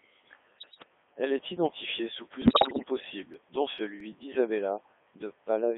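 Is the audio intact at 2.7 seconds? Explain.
No. At 2.7 seconds the audio falls inside a burst of bit errors on digital voice radio running from 2.42 to 2.88 s. Corrupted bits reached a very low-rate vocoder, where each bit steers the pitch, level, voicing or spectral shape of an entire frame. The damage suggests around one bit in ten flipped, across what sounds like about twenty frames. The synthetic speech lurches in pitch and loudness, shifts tone colour abruptly, and dissolves into warbling, bleeping gibberish for that half-second.

The whole clip, including this moment, is also coded with the Codec 2 vocoder. Its character fits the top 3.2 kbit/s mode. The encoder transmits no waveform, only pitch, voicing, energy and a spectral envelope, and the decoder then rebuilds the speech from summed sine waves. The result is heavily robotic and buzzy, confined to a band of roughly 250 Hz to 3.5 kHz. 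At 2.7 s, that synthetic base is further scrambled by the bit errors.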